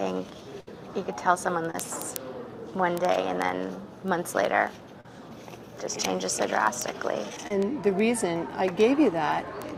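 At 0.60 to 0.68 s there is a burst of packet loss. About 70 ms of audio never arrived. The receiver stretched the last sound across the gap and faded it. A held buzz or fading hiss replaces the missing part.

Short concealed packet loss follows at 1.71 to 1.75 s, 5.01 to 5.05 s and 7.47 to 7.51 s. Each time about 30 ms failed to arrive. The decoder extended the preceding sound, then blended back in. Each gap is a brief smear or wobble.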